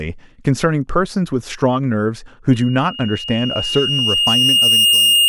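At 2.51 s a loudspeaker feedback squeal begins: the mic-speaker loop runs away at 2.8 kHz, swelling over about two seconds rather than holding steady like a whistle.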